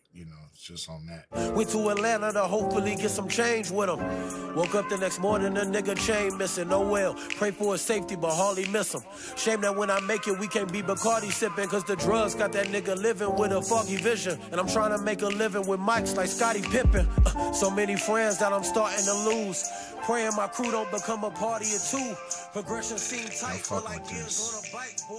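Nothing in the audio stood out as a technical problem on listening.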